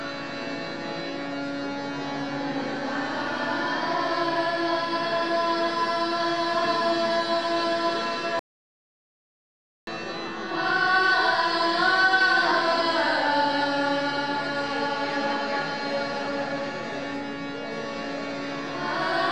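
At 8.39 s the sound cuts off abruptly and returns at 9.87 s, an audio dropout to silence lasting about 1.48 s. The input was likely lost while recording continued, so the waveform goes flat and the spectrogram shows a fully blank column.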